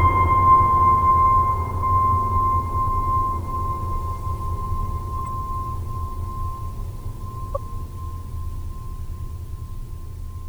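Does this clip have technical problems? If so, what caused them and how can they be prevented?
Yes. Corrupt frames decoded at 5.19–5.27 s and 7.55–7.57 s: damaged compressed frames were played anyway, leaving brief noisy blips, visible as short bursts of energy at the wrong frequencies. Error detection with concealment, or retransmission, would prevent it.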